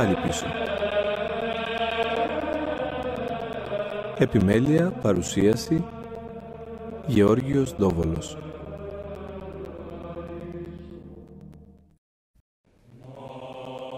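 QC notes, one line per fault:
0.16–13.92 s, periodic USB or driver dropouts: a steady ticking runs under the sound, eight pops per second, evenly spaced every 0.125 s, around a hundred in all. Each tick is a gap of about 10 ms where the audio drops to silence and then resumes. The strict regularity points to a background task blocking the USB bus or audio driver on a fixed schedule, so each stall leaves a silent hole that the ear hears as a click.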